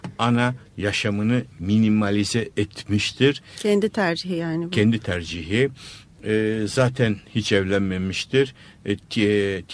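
Nothing jumps out here at all: the speech runs along steadily with no dropouts, glitches or other technical hiccups to point to.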